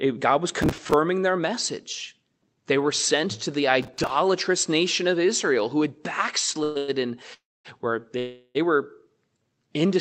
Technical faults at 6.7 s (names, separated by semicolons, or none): call audio freeze